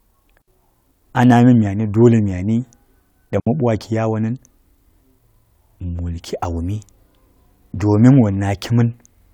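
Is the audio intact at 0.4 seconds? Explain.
No, a digital wireless dropout cuts in from 0.42 to 0.48 s. The wireless link lost too much data, so the receiver muted for 60 ms with a very quick fade, leaving a clean hole of near silence in the speech with no noise burst around it.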